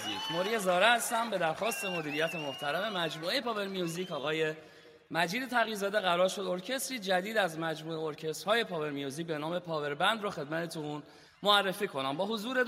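No technical faults can be heard anywhere in this clip.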